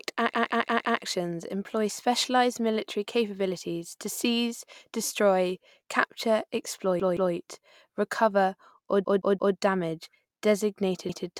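Repeated buffers interrupt the speech four times: 0.34 to 1.02 s, 7.00 to 7.34 s, 9.05 to 9.56 s, and 11.09 to 11.26 s. Each time, fresh audio arrived late, so the device replayed its last block. The same 171 ms piece plays four extra times, then two, three and one. This fits an 8192-sample buffer. Every repeat ends in a hard join, so each sounds like a stutter. Nothing seems lost.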